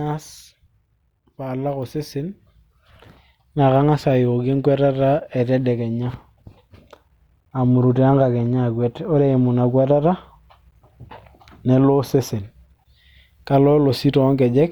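No technical faults are audible.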